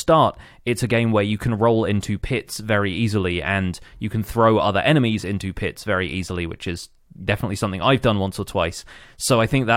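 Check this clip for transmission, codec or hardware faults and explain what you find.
Checking this clip turns up no faults to explain.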